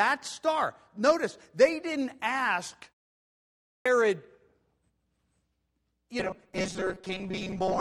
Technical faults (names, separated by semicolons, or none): clipped start after a pause; robotic sound from repeated short buffers